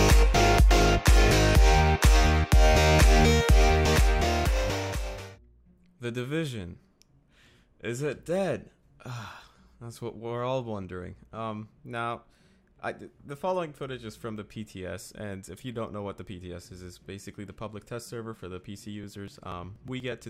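Near the end, from 19.04 s to 20.24 s, the audio picks up a steady train of ticks every 0.121 s, about ten in all, each where a few milliseconds of signal simply vanish and the waveform jumps ahead. These are periodic USB or driver dropouts, where a recurring background task stalls the audio path and chunks are skipped rather than padded.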